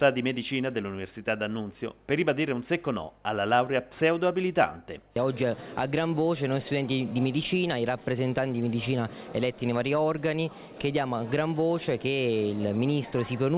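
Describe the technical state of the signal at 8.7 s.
At 8.7 s the signal is intact, with no dropout, glitch or distortion, only the steady narrowband sound of the call path, which carries nothing above 4 kHz, consistent with G.711 mu-law at 64 kbps.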